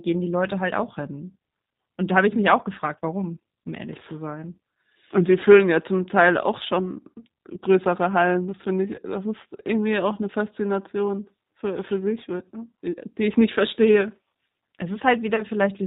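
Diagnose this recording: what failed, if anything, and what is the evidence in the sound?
The codec stage failed to preserve the full signal: G.729 codec damage is plainly audible across the whole speech clip. The sound is rough and slightly synthetic, consistent with an 8 kbit/s G.729A coder rebuilding each 10 ms frame from a vocal-tract filter, a pitch predictor and a few pulses. On a spectrogram there is a hard ceiling at 4 kHz with nothing above it, and formant bands look grainy rather than smooth.

The network stage dropped audio twice, and the speech codec concealed each VoIP packet loss, at 8.96 to 9.00 s and at 15.36 to 15.43 s. Each gap fits one lost 20 ms packet. The decoder extended its last pitch and filter state and faded the gain, so each spot is briefly stretched and weak before the audio recovers. On the waveform, near-identical pitch cycles shrink in amplitude. On a spectrogram, the harmonic stripes freeze flat and then dim.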